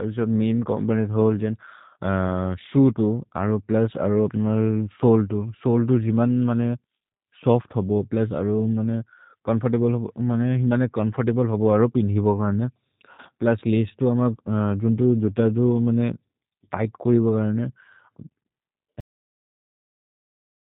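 Throughout, the speech passes through a G.729 codec at 8 kbit/s, which rebuilds each 10 ms frame from a vocal-tract filter, a pitch predictor and a few pulses rather than the original waveform. The codec damage is plainly audible. Nothing above 4 kHz survives, so the sound is dull and band-limited, and the voiced parts take on a rough, slightly synthetic buzz typical of this kind of model-based coding.

At 13.13 s, just after "अरो पिन्हि बगाने", VoIP packet loss concealed by the speech codec sets in and lasts until about 13.20 s. Around 50 ms of audio never arrived, which fits about five lost frames. The decoder filled the gap by repeating its last pitch and filter settings at falling gain, so the sound smears into a brief buzzy tone or coloured noise that fades. Because each frame depends on the one before, the voice stays weak or distorted for tens of milliseconds or more after real audio resumes.

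At 19.00 s there is a cut-off end: the final stretch of audio was never written out, so playback stops mid-sound with no natural decay. The level drops straight to digital silence, and that silence runs for the remaining 1.7 s of the clip.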